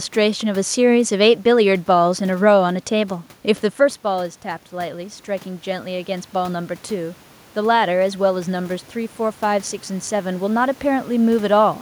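From 3.80 to 7.26 s the automatic gain control rises: after the speech level at the microphone drops by about 10 dB, around 3.5 s as the talker moves back, the control judges the input too quiet and slowly adds about 5 dB of gain over those three and a half seconds. The speech swells back up, and the room noise behind it climbs in step, so the background audibly grows louder.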